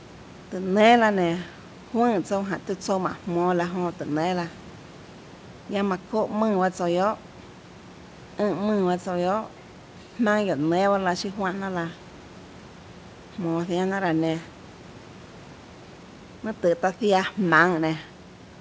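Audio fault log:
No faults heard.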